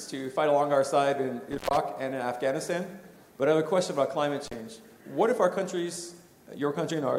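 Intermittent contact occurs at 1.52 to 1.77 s and again at 4.46 to 4.54 s. A loose plug or cable briefly opens the connection, cutting the sound for about 127 ms and then about 34 ms, with crackle at each break and reconnection and faint hiss in the gaps.

Damaged data in a compressed stream shows up at 6.90 s as a short glitch. Corrupted bytes in the encoded file make the decoder misread a frame and lose sync, then search for the next valid frame header.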